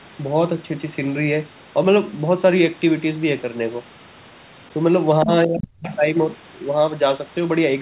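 From 5.24 to 5.93 s the speech ducks by about 40 dB, likely speech suppressed in double talk.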